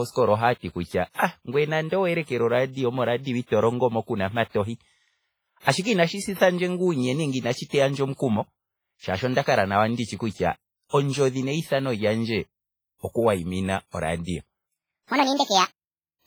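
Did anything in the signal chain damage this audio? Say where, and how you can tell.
Yes. Throughout, the speech carries heavy codec damage: ringing, washy smearing and hiss that swells and fades with the signal, likely from WMA compression at a low bitrate, around 24 kbps. On a spectrogram, weak high-frequency detail shows gaps and blurred, smeared edges around syllables.

From 14.68 s to the end, a section plays at the wrong speed, 1.63 times too fast, so the speech turns hurried and close to ten semitones higher. The likely cause is playback or editing against a mismatched clock. The spectrogram shows harmonics jumping upward and the waveform compressing in time.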